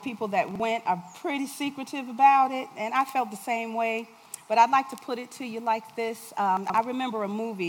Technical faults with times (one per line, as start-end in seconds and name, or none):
0.51-0.60 chunks out of order
6.57-6.74 chunks out of order